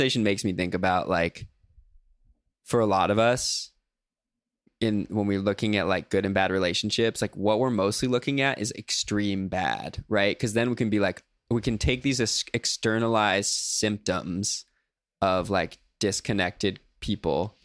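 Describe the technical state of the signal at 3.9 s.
At 3.9 s the signal is intact, with no audible fault at that moment.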